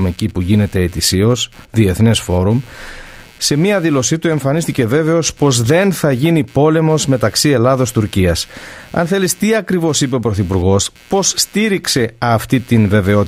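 Computer activity noise runs throughout the speech, a buzzy chirping at around a hundred pulses per second, well below the voice. Shifting processor, graphics or mouse load disturbs the audio circuit's shared ground, so the noise follows the computer's activity rather than the speech.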